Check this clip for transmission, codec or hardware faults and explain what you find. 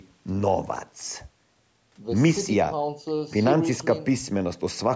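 No transmission, codec or hardware faults.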